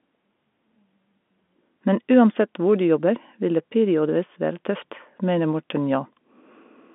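No technical faults are audible.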